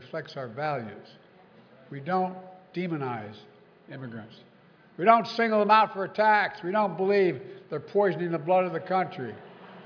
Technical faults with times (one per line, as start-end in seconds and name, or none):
none